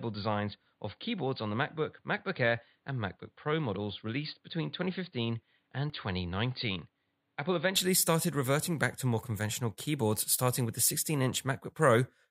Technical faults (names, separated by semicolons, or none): input switched to a poorer device; dropped buffer (overrun)